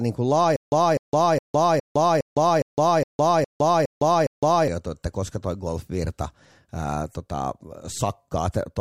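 Speech, with a stutter with silent gaps from 0.56 s to 4.68 s, ending just before "että koska toi golfvirta". A burst of about 252 ms repeats ten times at a steady 412 ms period, each repeat followed by roughly 160 ms of digital silence. The likely cause is a stalled player or stream replaying its last buffered fragment on each retry and then running dry. The audio due in that span is lost.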